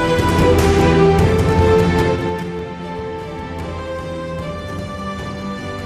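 Zipper noise from 1.95 to 2.51 s: the level drops by roughly 10 dB in unsmoothed 3 dB steps, about seven per second, each leaving an audible tick.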